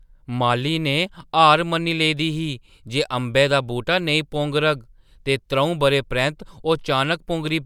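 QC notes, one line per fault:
No faults found in this speech recording.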